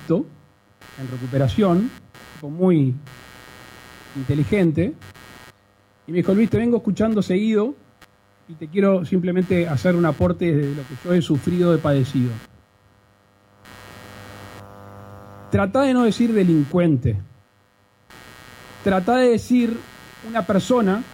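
A buzzing, chirping layer runs through the whole clip, pulsing at around 150 Hz and sitting roughly 25 dB below the sound. This is computer activity noise: processor, graphics or mouse load shifting the shared ground of the audio circuit, so the interference follows the computer's activity, not the audio.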